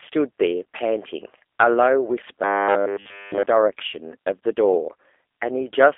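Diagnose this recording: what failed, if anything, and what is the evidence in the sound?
The codec stage is at fault: the speech went through G.729, a low-rate VoIP coder that keeps only a vocal tract filter, a pitch predictor and a few sparse pulses per 10 ms frame, which fits an 8 kbit/s G.729A path. Throughout the speech, nothing reaches above about 3.6 kHz, the band sits roughly between 300 Hz and 3.5 kHz, and the modelled excitation gives the speech a plainly audible rough, synthetic quality.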